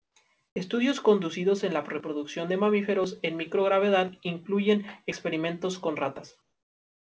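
A speech recording in which the quiet background is replaced by comfort noise three times: 0.00 to 0.16 s, 0.48 to 0.56 s, and from 6.42 s, after "microgravedad incluyen experimentos con", to the end. In each gap the real room tone gives way to a flat, featureless hiss, about 14 dB quieter in the first and about 8 dB in the others. The likely cause is discontinuous transmission, with the receiver synthesising noise during pauses. Nothing is heard above 8 kHz, which fits a G.722 call path.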